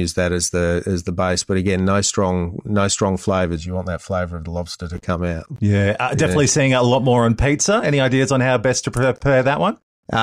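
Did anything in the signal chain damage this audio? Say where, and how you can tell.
Yes. From 3.56 to 4.95 s, between "no strong no strong" and "come out", the speech turns hollow and phasey. This is channel delay (comb filtering) at the buffer stage. One channel lags by roughly 1.5 ms, so summing to mono cuts evenly spaced notches, the first near 300 Hz.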